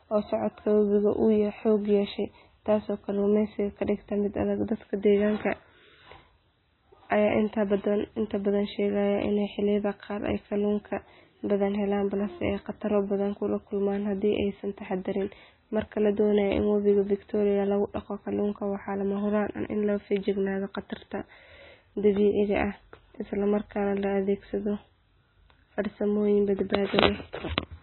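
A speech clip, likely passed through successive lossy codecs, transcoding between lossy codecs, fitting a low-rate MP3 re-encoded to AAC-LC: throughout, nothing sounds above 4 kHz, and smeared, swirly artefacts pile on one another.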